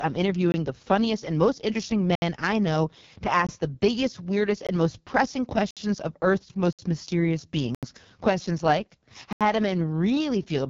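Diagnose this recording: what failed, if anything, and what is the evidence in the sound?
Codec stage: the speech is coded as AMR wideband (HD Voice) and sounds rough and raspy throughout, with nothing above 7.2 kHz. That heavy damage fits the lowest 6.6 kbit/s mode, where the pulse-driven vocal tract model has too few bits to track the voice cleanly.

Driver or buffer stage: blocks of digital silence cut the audio abruptly at 0.52–0.54, 2.15–2.22, 3.47–3.49, 4.67–4.69, 5.71–5.77, 6.73–6.79, 7.75–7.83 and 9.33–9.41 s, lasting 20 to 80 ms. Each cuts out and back with no fade, consistent with the output buffer not being filled in time.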